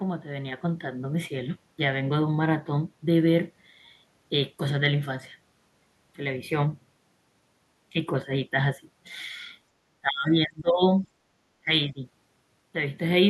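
Speech suppressed in double talk, likely an echo canceller turning down both sides at once, drops this speech by about 40 dB from 9.83 to 10.83 s, with shallower dips at 11.6–11.7 s and 11.92–12.0 s.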